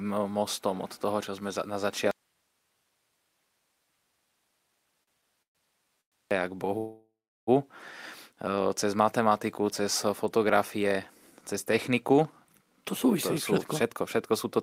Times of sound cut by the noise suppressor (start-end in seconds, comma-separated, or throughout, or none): none